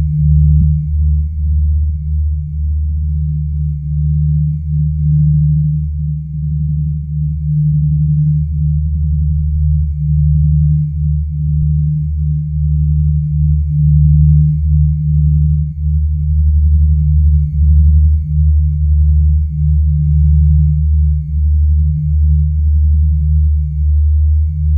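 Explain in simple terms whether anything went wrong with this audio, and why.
Two quick glitches, at 0.61 s and 11.61 s, each a tiny chirp or blip. That's damaged data in a compressed stream: a few bytes got garbled, so the decoder misread that bit of the file and had to find its footing again.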